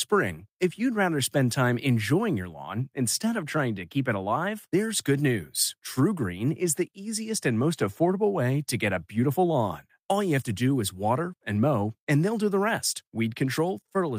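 Nothing goes wrong anywhere in this speech recording, with no dropouts, glitches or other technical trouble to point to at any moment.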